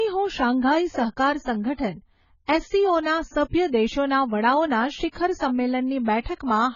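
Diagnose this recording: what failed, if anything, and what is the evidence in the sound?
The codec stage failed. Throughout the speech there is nothing above 7 kHz, and heavy damage leaves it dull, smeared and warbly. This is likely AAC compression, consistent with AAC-LC near 16 kbps. Unlike a plain low-pass filter, it starves bands and warbles within the passband.

Pre-echo, also from the codec, appears from 5.12 to 5.16 s: a short hiss rises about 32 ms before an attack, which then sounds softened. The block's quantisation noise spills backward into the quiet lead-in. Reverberation or a click would follow the onset, not precede it.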